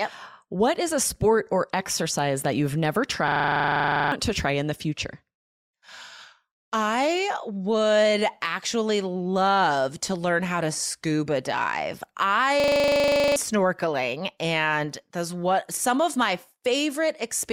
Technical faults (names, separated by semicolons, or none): system hang loop